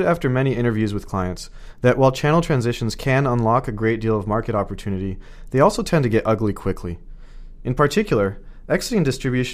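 A tiny click, almost a brief buzz, sounds at 2.22 s, between "with clients that while" and "transitions can unlock a". This is a repeated buffer: with no new audio in time, a 1.45 ms fragment, fitting a 64-sample buffer, plays three times over, with essentially nothing lost.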